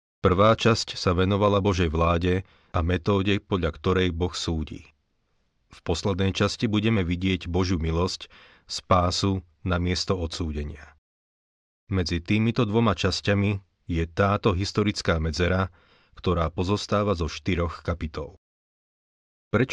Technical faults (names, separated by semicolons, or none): none